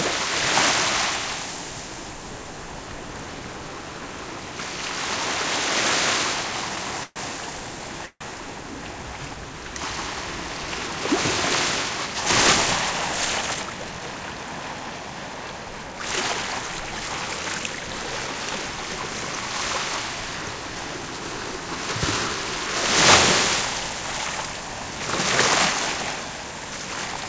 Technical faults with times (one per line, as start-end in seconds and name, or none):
6.76-8.23 repeated stalls (stutter)
13.54-14.21 jitter buffer speed-up
18.27-18.65 jitter buffer speed-up